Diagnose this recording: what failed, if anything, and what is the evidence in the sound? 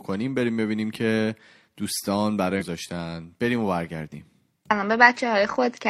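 Codec stage: damaged data in a compressed stream. A brief disturbance at 2.56 to 2.64 s. Corrupt frames made the decoder lose sync and hunt for the next header.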